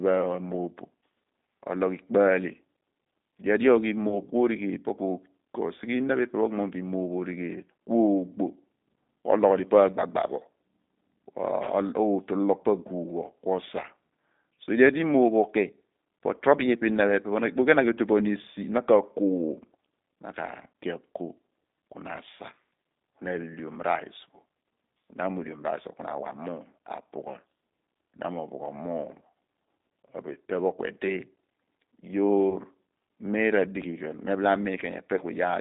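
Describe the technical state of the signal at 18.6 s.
At 18.6 s the speech sounds rough and slightly synthetic, with a muffled, telephone-narrow tone running from about 200 Hz to 3.7 kHz. This is G.729 codec damage present throughout. The voice is rebuilt at 8 kbit/s from a vocal tract filter, pitch prediction and a few pulses per frame.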